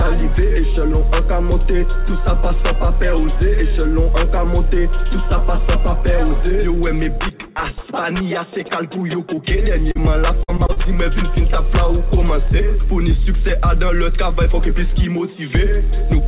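The audio sits on a call path that stops at 4 kHz, which points to a narrowband G.711 mu-law leg, and it carries three packet-loss problems close together. First up is short concealed packet loss at 9.36–9.39 s and again at 9.91–9.97 s. In each spot a chunk of packets didn't reach the decoder in time: 20 ms the first time, 40 ms the second. The receiver papered over the hole by stretching the last bit of sound forward before easing back into the real signal, so you hear a quick smear or wobble rather than a dropout. Right after that, from 10.43 to 10.82 s, it turns into repeated packet loss with a robotic sound. Holes keep landing one after another, the longest about 50 ms, and roughly a third of that stretch is patched rather than real. Each patch barely settles before the next gap hits, so the sound goes choppy, with bits missing.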